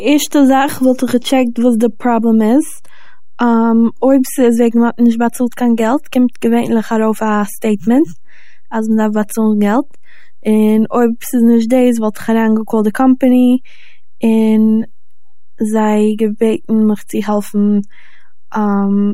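A DC offset of about -24 dBFS shifts the whole speech waveform off zero throughout, costing headroom and leaving steady energy at the very bottom of the spectrum.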